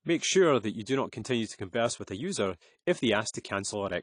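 Throughout the speech, the signal has likely been through AAC compression at a low bitrate. The encoder quantises its frequency lines coarsely against a hearing model and throws away detail to save bits. Nothing reaches above 10.2 kHz, so the top end sounds dull. The codec damage is plainly audible as a smeared, warbling texture on sustained sounds and a fizzy edge on sibilants, which fits an AAC-LC stream at around 32 kbps.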